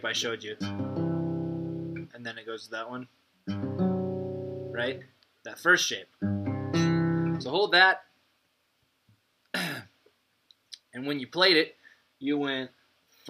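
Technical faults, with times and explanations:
No technical faults can be heard anywhere in the clip. Nothing in the audio calls for a time or an explanation.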